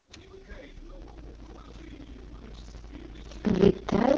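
From the first moment the speech carries the AMR wideband (HD Voice) codec at its lowest setting, 6.6 kbit/s, where the damage is heavy. The speech turns rough and raspy because the coder rebuilds it from a crude pulse-and-filter model. On a spectrogram, energy stops at a hard ceiling near 6.9 kHz. The strip from 6.4 kHz up looks like smeared, even noise instead of harmonic detail.

At 1.0 s a block size mismatch with zero padding begins and lasts to the end. The stage upstream writes blocks shorter than the 512-sample blocks being read, and the gap is filled with silence. A dropout is repeated 31.2 times a second, which is heard as a steady low buzz. The speech also slows to 0.625 of its proper speed while keeping about its normal pitch. The waveform shows near-silent gaps at regular intervals of about 32 ms, and the spectrogram shows evenly spaced vertical stripes.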